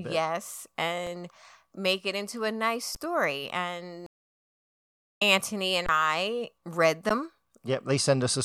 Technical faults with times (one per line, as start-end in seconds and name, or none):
1.06 underrun with held sample
2.95 underrun with held sample
4.06-5.22 stream reconnect
5.86-5.89 underrun with held sample
7.09 underrun with held sample